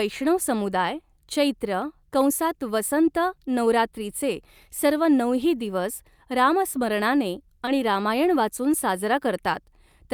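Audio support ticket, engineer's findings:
Brief smear at 7.65–7.69 s, about 40 ms. Short concealed packet loss: roughly 20 ms of audio arrived too late for the decoder. The receiver's concealment extended the preceding sound to fill the gap, then crossfaded back into real audio. Probable component: network jitter buffer.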